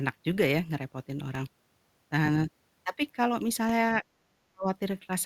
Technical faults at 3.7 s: DC step

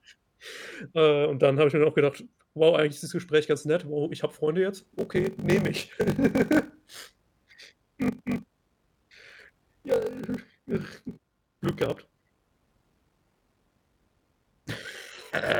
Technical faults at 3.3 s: none

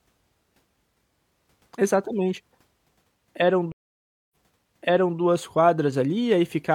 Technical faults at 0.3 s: none

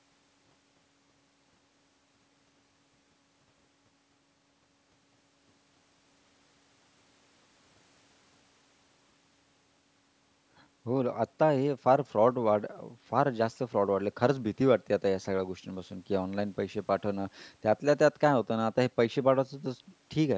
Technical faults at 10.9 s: none

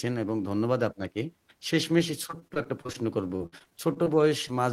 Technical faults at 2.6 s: repeated packet loss (robotic sound)

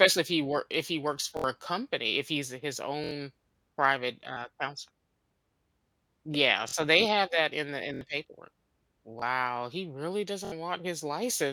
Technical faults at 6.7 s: repeated buffer

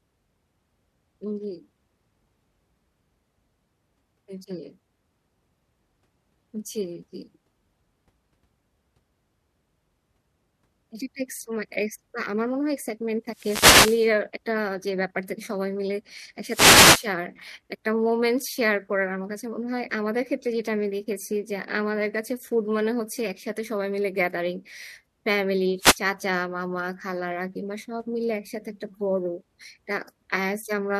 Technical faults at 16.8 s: wireless microphone noise hit

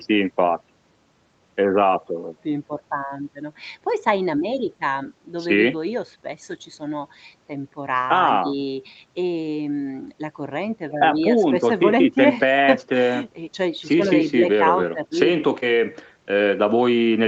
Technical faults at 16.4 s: none

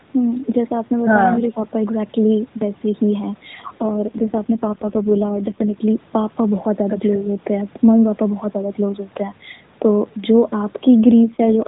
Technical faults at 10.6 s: none

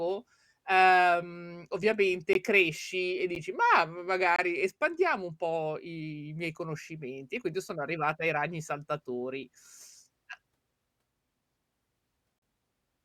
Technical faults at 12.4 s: gap between stream segments

